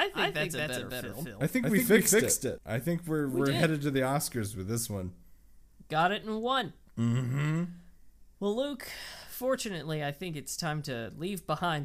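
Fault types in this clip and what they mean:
Doubled audio track: The same signal is likely being picked up twice, with a second, slower capture path feeding a copy into the mix, so a full-band duplicate trails the original by about a fifth of a second at roughly equal loudness. It is already sounding when the clip opens and gives the speech a hard, flat echo with no decay or room colour, until the copy cuts off abruptly at 2.58 s.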